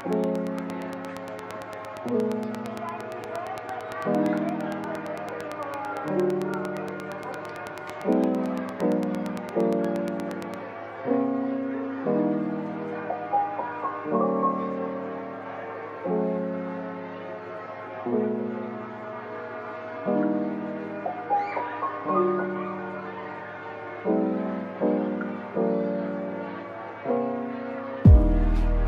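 From the very start to about 10.55 s there's a train of clicks, roughly a hundred regular ticks at 8.7 per second, loud over the sound, likely electrical interference.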